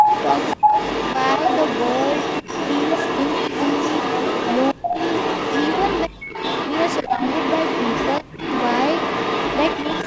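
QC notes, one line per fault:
0.00–6.09 s, echo leak: a second copy of the speech trails the original by 244 ms at roughly equal loudness, likely sound from the far end's loudspeaker that its echo canceller failed to remove. Unlike room reverberation, the copy is one distinct repeat at a fixed delay, not a smooth decaying tail.
6.25–10.06 s, echo leak: the delayed copy returns, now 302 ms behind and again about as loud as the speech itself. The delay has jumped from 244 ms to 302 ms. A steady reverberant tail would not change its delay like this.
0.03–0.09, 0.55–0.73, 4.74–4.94, 6.07–6.33, 7.03–7.21 and 8.21–8.41 s, speech suppressed in double talk: the speech ducks in short dips, mostly deep enough to nearly vanish, but only about 5 dB at 0.03 s and about 10 dB at 7.03 s. These are likely the echo canceller turning both sides down while they overlap. The dips are gain reductions of 70–300 ms, not the abrupt, clicky gaps of packet loss.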